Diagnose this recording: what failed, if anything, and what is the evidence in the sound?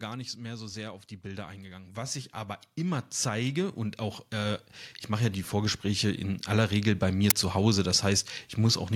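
The fault is automatic gain rising in the call processing stage. From 1.22 s, just after "so sehr auf die", the level climbs steadily until 6.52 s, about 15 dB in total, with speech and background noise swelling together. The AGC judged the input too quiet and raised its gain gradually.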